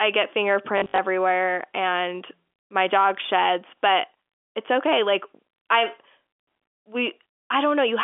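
From 0.78 to 0.98 s the speech breaks into a short robotic stutter. This is packet loss with the last packet repeated. About 140 ms of audio is missing, scattered over 200 ms, with the longest gap 60 ms. The receiver fills each gap by replaying the last good chunk. The repeats ignore the pitch, and the 60 ms run buzzes at about 50 Hz. That fits seven lost 20 ms packets. The narrow G.711 telephone band carries through.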